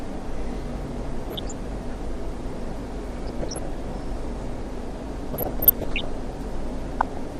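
An everyday-sound recording that comes across dull and gurgly throughout, likely MP2 compression at a low rate, something like 80 kbps, with upper sub-bands dropping out and the rest coarsely quantised. On top of that there's DAB burbling, short blips of noise in single sub-bands from bit errors (well under one percent) reaching the MP2 frames, at 1.30–1.52 s, 3.17–3.67 s, 5.33–6.05 s and 7.00–7.17 s.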